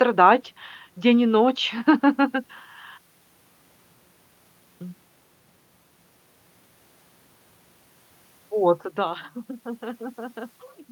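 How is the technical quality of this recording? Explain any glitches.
No glitches turn up anywhere in the speech recording. Where the level rises or falls, it moves gradually, like a fader being eased up or down.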